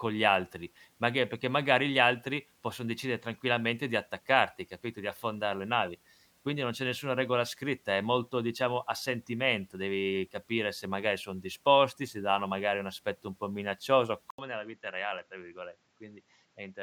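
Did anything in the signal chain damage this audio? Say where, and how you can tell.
Yes. After "aspetto un po' minaccioso", at 14.30 s, the sound drops out for 80 ms, then returns duller and slightly quieter, with nothing above 7.6 kHz and a faint new hiss. The driver stage likely switched the input to a poorer device.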